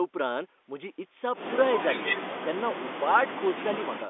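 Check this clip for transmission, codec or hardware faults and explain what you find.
Nothing wrong turns up here: the speech just has the narrow, boxy sound of an ordinary telephone line, with the band running from roughly 250 Hz up to about 3.5 kHz, which is exactly how that kind of call is supposed to sound.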